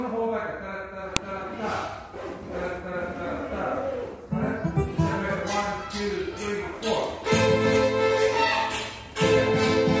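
At 1.17 s a sharp, loud snap marks a file header played as audio: header bytes from a joined-on piece were decoded as samples. Unlike a dropout or discontinuity click, the snap ignores the surrounding signal and sits exactly at the piece boundary.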